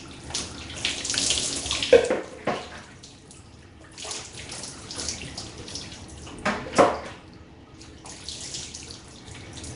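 Everyday sounds run through a rough, hissy halo and a smeared, underwater blur from start to finish, with nothing above about 10.6 kHz. The likely cause is Nellymoser compression, Flash's Asao codec, whose plainly audible block-coding damage fits a stream of around 44 kbps and fills starved bands with noise.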